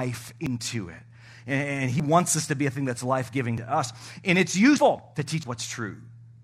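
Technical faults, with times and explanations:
0.46, 2.00, 3.58, 4.78 and 5.43 s: dropped buffer (overrun). Each is a jump where the speech skips ahead without silence. Roughly 50 to 150 ms vanishes, most at 4.78 and 5.43 s. Likely the hardware overwrote samples before they were read, splicing the edges.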